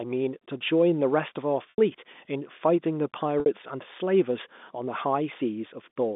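At 1.70 s the speech drops out for about 80 ms, and at 3.40 s for about 60 ms. Both are packet loss with pitch repetition. The receiver fills each gap by repeating the last pitch period and fading it out, so the sound briefly holds on a buzzy tone before the speech resumes. The gap lengths fit four and three lost 20 ms packets on a G.711 telephone line limited to about 200 Hz to 3.6 kHz.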